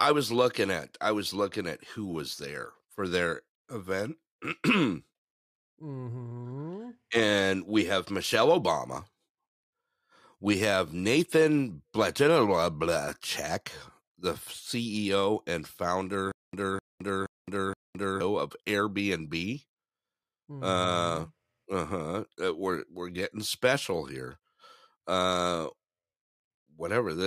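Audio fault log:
16.32–18.21 s, stutter with silent gaps: the playback or stream likely stalled, and on each retry it replayed the last fragment it held before running dry, so a 257 ms burst of the speech returns four times at an even 472 ms pace, each repeat followed by about 215 ms of dead digital silence. The regular repeat-and-drop rhythm sounds mechanical rather than spoken, and whatever should have played across those two seconds never arrives.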